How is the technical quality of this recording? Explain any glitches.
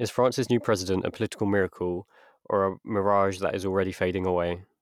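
The recording has no technical glitches: the speech signal comes across intact and continuous, with no dropouts, distortion or other disruptions to report.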